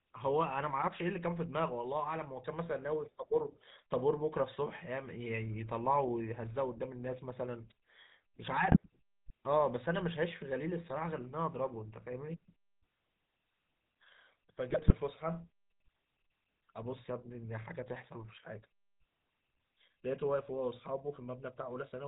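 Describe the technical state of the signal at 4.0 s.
At 4.0 s the speech carries GSM full-rate codec damage, present across the whole clip. The vocal tract is modelled and driven by regular pulses, and nothing passes above 4 kHz. It differs from simple band-limiting by a plainly audible buzzy, gravelly roughness, which fits a 13 kbps stream.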